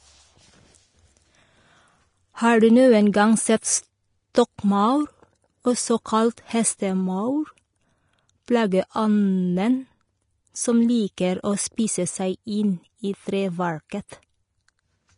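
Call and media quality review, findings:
Low-bitrate Vorbis compression, likely, across the whole speech clip: coarse quantisation of the residue above the spectral floor, with the encoder's lowpass removing everything above 10.5 kHz. The result is plainly audible hiss and graininess, roughened tonal parts, softened onsets and dull top end, which fits a rate near 33 kb/s.

Pre-echo at 4.33 s: a sharp onset late in a transform block, with quantisation noise spread evenly across that block. A short hiss leads the attack by about 15 ms and the onset smears.

Pre-echo at 11.16 s: the same block-level noise spreading, with hiss about 16 ms ahead of a sharp onset and a blurred attack.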